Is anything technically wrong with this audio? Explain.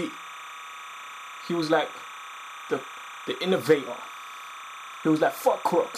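Yes. Throughout the clip a steady chirping warble sits behind the sound, around 15 dB below it. This is timecode bleed: linear timecode leaking in from an adjacent track or cable, its square wave flipping between tones near 1 and 2 kHz at a rate that fits 29.97-frame code.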